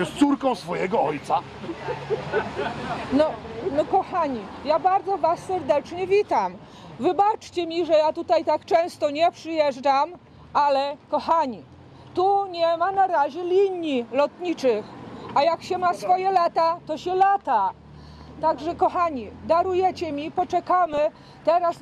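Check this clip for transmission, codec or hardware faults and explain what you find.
One transmission fault is present. From 20.86 to 21.15 s there is DAB burbling. Bit errors from weak reception, a few tenths of a percent, evade error correction and corrupt MP2 sub-band levels frame by frame. The result is short blips of noise and sub-bands jumping in level over the sound.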